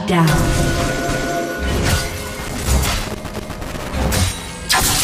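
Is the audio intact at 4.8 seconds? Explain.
Yes, at 4.8 seconds the audio is intact, with no dropout, click, distortion or other fault at that moment.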